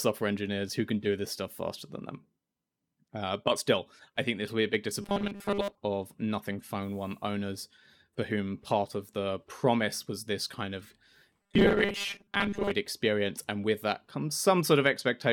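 At 5.02–5.78 s and 11.42–12.71 s, robotic sound from repeated short buffers imposes a rigid 200 Hz buzz, likely a 5 ms buffer replayed over skipped audio.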